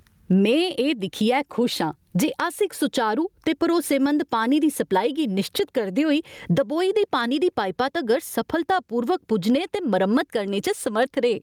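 Gain pumping runs throughout, with the gain swinging by about 20 dB. The likely cause is input gain set far too high, with a fast limiter clamping each peak and squashing the dynamics flat.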